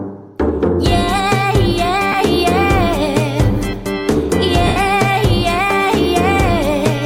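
At 2.12 to 2.15 s, a 20 ms gap from lost LE Audio frames, consistent with two 10 ms frames, is concealed by the LC3 decoder, which repeats the last spectrum with random signs. Tonal detail blurs into a brief noisy smear, and on a spectrogram this shows as a short grainy patch. At 4.67 to 4.76 s, a longer 90 ms loss, consistent with nine frames, gets the same treatment. The smear starts out at the level of the last good frame and then fades, so the waveform envelope sags as the concealment dies away. The light lossy compression running through the clip is faint beside these dropouts.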